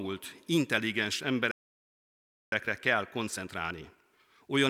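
At 1.51 s the speech halts mid-flow and stays silent for about 1.01 s until 2.52 s, a playback stall, likely the player starving for data. From 2.52 s to the end the time-compressed catch-up runs at 1.1 times speed, hurried but at normal pitch, unlike a plain speed-up.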